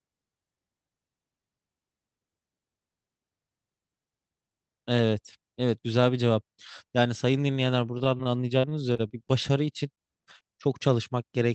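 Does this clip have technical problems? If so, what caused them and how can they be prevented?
Yes, there's a rough patch of repeated packet loss (robotic sound) from about 7.95 to 9.31 s. Over that stretch eleven separate holes open up, the longest about 40 ms, adding up to roughly a tenth of a second of lost audio. Each one gets papered over by stretching the last bit of sound, so around 14% of that span is synthetic fill, and the speech turns choppy. To prevent it, get the caller onto a steadier network or give the jitter buffer more headroom, and enable forward error correction.

Then there are two quick cases of short concealed packet loss, at 9.95–9.99 s and 10.39–10.42 s, each about 20 ms missing. The decoder bridges each gap by carrying the preceding sound forward and then easing back into the real signal, so you just get a tiny smear or blip, and a brief consonant could drop out there. 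The same fixes apply: a more stable connection plus FEC or redundancy so those single lost packets can be rebuilt.

Under all of this the call codec is doing its usual thing, with the audio topping out around 8 kHz, which fits Opus running at about 40 kbps.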